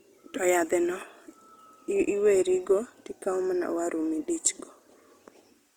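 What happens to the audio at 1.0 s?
At 1.0 s the speech is passing through Opus compression that spans the whole clip, likely a music-mode encode at around 24 kbps. Short of bits, it fills bands with folded or noisy content, so the speech sounds plainly grainy and rough, though treble still reaches 20.2 kHz.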